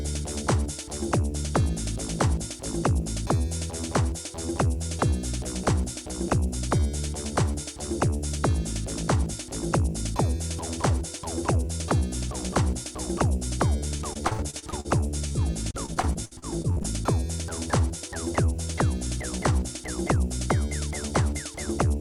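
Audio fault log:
13.97–14.86 s and 15.28–16.86 s: repeated packet loss (robotic sound). Dropouts of up to 54 ms and 62 ms recur closely; each is patched by stretching the preceding sound, so 22–28% of each stretch is filler, producing choppy, robotic audio.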